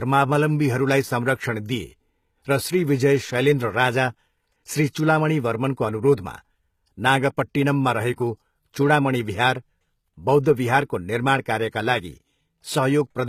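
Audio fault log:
throughout: HE-AAC compression. The treble keeps its brightness but sounds synthetic, with gritty, lispy s sounds and a metallic sheen that doesn't follow the harmonics below it. Nothing is present above 14.9 kHz. This points to spectral band replication, likely from HE-AAC at a low rate, about 20 kbps. A plain low-pass filter would instead leave the top dull and empty. Here the upper band is full but rebuilt from copied lower bands.
8.16–8.18 s and 10.43–10.46 s: pre-echo. Each time, a short hiss of about 21 ms arrives just before a sharp onset, and the attack itself is softened. The first comes right before "चुडामणि बिहार". The codec spreads its quantisation noise across a whole transform block, so noise sized for the loud onset also fills the quiet gap ahead of it. Because the smear comes before the attack, it is not reverb or an echo trailing after the sound.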